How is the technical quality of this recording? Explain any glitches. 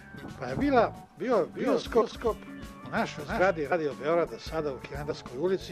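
There are a couple of real problems here: a stretch where the audio is doubled, and two small jumps where compressed frames were skipped.

From 1.35 to 3.51 s you get a doubled audio track. A second full-band copy trails the original by around 0.4 s, sitting roughly 5 dB lower. It has no reverb tail or room colour, so it sounds like a flat, clean echo rather than a space. It cuts in and out abruptly at both ends. The likely cause is the signal being picked up a second time through a slower path, or an edit leaving two copies out of step.

Then there are two compressed frames skipped events, one from 2.00 to 2.03 s (inside the doubled stretch) and one at 3.71 s. Whole frames went missing or were rejected as damaged by the decoder, so playback jumps ahead. The first skip loses around 70 ms and the second about a tenth of a second.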